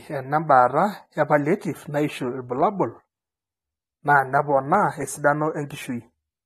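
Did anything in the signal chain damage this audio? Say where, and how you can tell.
Yes, at the codec stage: the speech is dull throughout, with nothing above 13.3 kHz plus warbly, smeared sibilants, likely AAC compression at a low bitrate near 32 kbps, not a plain low-pass filter.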